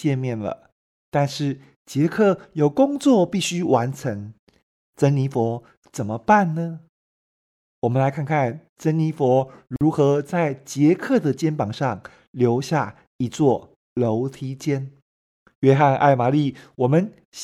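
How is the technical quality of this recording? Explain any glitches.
One glitch stands out: at 9.76 to 9.81 s the speech drops into a sudden silence of about 49 ms, with softened edges, then resumes exactly where it left off. This is a gap at a join of encoded pieces, where separately encoded segments were joined untrimmed, leaving encoder start-up delay and last-frame padding as dead air.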